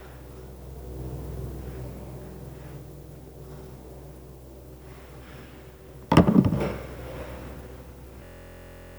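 At 8.24 s a system hang loop begins: the computer or driver froze and the hardware replayed one 23.2 ms buffer (fits 1024 samples), producing a steady 43.1 Hz buzz to 8.98 s.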